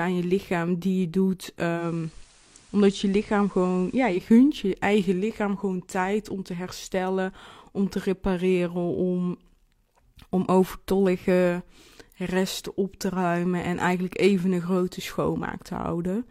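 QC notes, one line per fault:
1.75–4.22 s, digital radio blending to analogue: the speech turns slightly quieter, down about 1 dB, with hiss rising to roughly 30 dB below the signal, then clears again. The receiver lost its digital stream and cross-faded over about 111 ms to the station's FM broadcast. The FM path's noise floor supplies the hiss until the digital signal returns.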